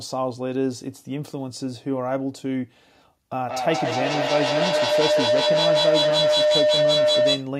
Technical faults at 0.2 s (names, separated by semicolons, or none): none